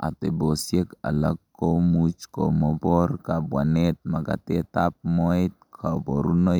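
Nothing in this speech recording stood out as a technical fault on listening.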